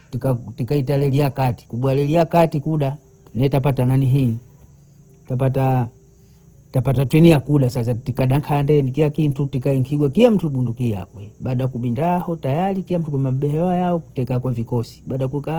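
Opus compression throughout: the speech sounds grainy and rough, likely from low-rate music-mode coding, near 16 kbps, that fills starved bands with folded or noise content up to 20.4 kHz.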